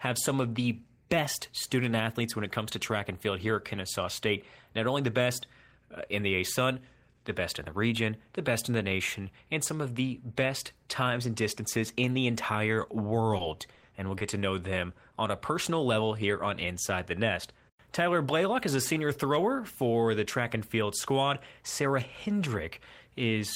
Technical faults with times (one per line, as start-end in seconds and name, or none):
13.37-14.22 repeated packet loss (robotic sound)